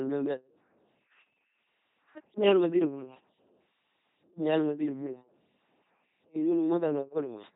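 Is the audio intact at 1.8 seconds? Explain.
No. At 1.8 seconds, as across the whole clip, the speech has a heavy, buzzing, mechanical robot quality, with nothing above about 3.9 kHz. This is the LPC-10 vocoder at work. It rebuilds each moment from a simple vocal tract filter driven by either a pulse train or noise, so every instant is forced to be fully voiced or fully unvoiced. The result fits the 2.4 kbit/s LPC-10 codec.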